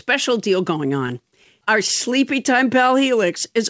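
From 0.88 to 1.68 s the speech stutters. These are repeated stalls. Packets arrived late, so the jitter buffer ran empty six times. Each gap, none longer than 16 ms, was filled by continuing the last sound. Nothing is lost, but the speech drags. The sound stops at 8 kHz, which fits a G.722 call path.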